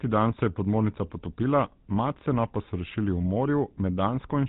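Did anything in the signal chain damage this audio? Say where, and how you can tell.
Yes, at the codec stage. GSM full-rate coding affects the whole speech clip. It has a buzzy, gravelly roughness and no content above 4 kHz. The codec models the vocal tract and excites it with sparse, regular pulses, discarding much of the detail. The damage is plainly audible, which fits a 13 kbps GSM full-rate stream.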